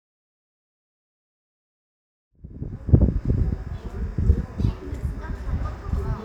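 No faults are audible anywhere in this audio.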